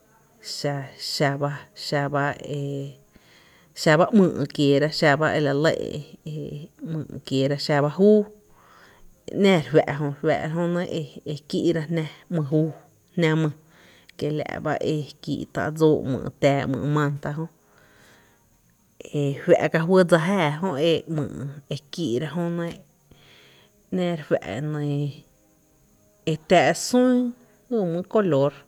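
Nothing in the recording stood out as a problem on listening.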